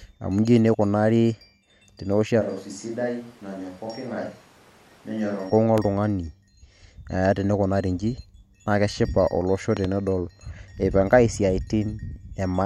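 A speech recording with two kinds of fault. From 2.43 to 5.49 s it switches to a distant microphone: the sound turns roomy and hollow, drops about 10 dB, and room noise rises to roughly 25 dB below the speech, likely because the close microphone's feed was lost. On a spectrogram, that span shows thinned low end and a raised noise floor. A loud pop at 5.78 to 5.81 s peaks about 15 dB above the speech, and a double pop at 9.77 to 9.87 s peaks about 10 dB above it. Each is likely a voltage spike from a plug, switch or static, and appears as narrow waveform spikes and full-height vertical lines on a spectrogram.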